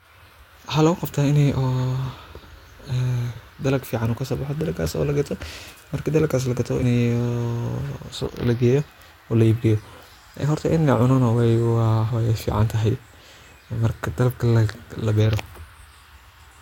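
A speech recording with compressed frames skipped at 3.35, 6.81, 8.25, 10.42 and 12.09 s. The audio jumps ahead roughly 50 to 200 ms each time, as around "dalag fiican oo kasoo" and after "marki dalagaas la gato".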